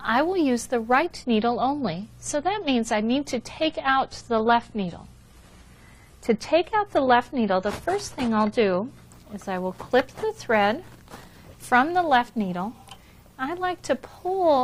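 An adaptive stream at a lower bitrate ran from 1.06 to 9.06 s, consistent with a drop from 96 to 32 kbit/s, so treble above 14 kHz vanishes abruptly and artefacts rise, without any gap.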